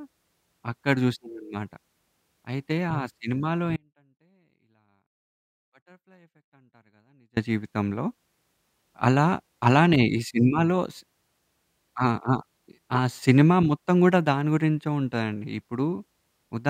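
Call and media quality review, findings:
Audio dropout to a faint residue, 3.77–7.37 s (3.6 s): speech cuts abruptly to a faint leak around 35 dB down. Likely an upstream capture or transport interruption with the path staying live. Waveform: near-flat block, hard edges. Spectrogram: pale band.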